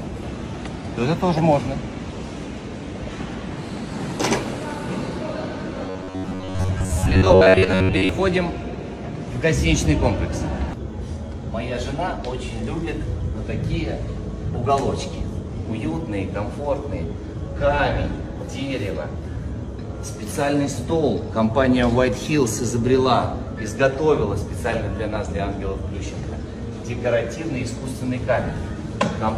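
From 5.88 to 8.09 s there's robotic sound from repeated short buffers: a rigid buzz at 93.8 Hz, likely from roughly 10.7 ms chunks looping over most of the passage.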